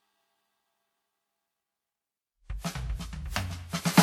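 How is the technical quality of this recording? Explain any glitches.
Quality's fairly rough across the whole music clip. Generation loss runs throughout: it sounds swirly, hollow and smeared with blurred attacks, likely from roughly ten WMA-style re-encodes each stacking fresh quantisation noise.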